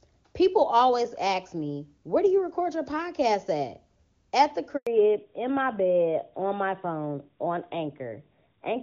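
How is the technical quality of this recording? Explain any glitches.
The recording has two glitches close together in the middle, one right after the other, and the sound quality drops for the rest of the clip.

At 4.77 s the speech cuts out for about 100 ms, fading within a few tens of milliseconds and then sitting in silence until 4.87 s. This is a handover gap. The phone moved the call onto a different network, and no speech frames arrived while the link was re-established. Anything said in that tenth of a second is lost.

From 4.87 s to the end, the voice sounds duller and rougher, with its crisp upper detail gone. This is a fallback to narrowband. Before the switch, the call ran on the AMR wideband (HD Voice) codec, and the clean, full sound of the opening fits its highest rate. After the handover, the call dropped to the older AMR narrowband codec, and nothing above 4 kHz comes through.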